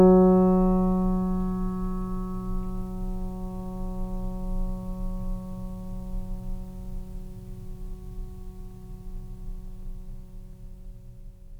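The music comes through with no audible technical fault anywhere from its opening moment to its close.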